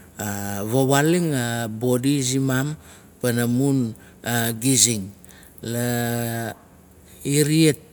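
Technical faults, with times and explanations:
Listening to this speech recording, nothing stood out as a technical problem at any point.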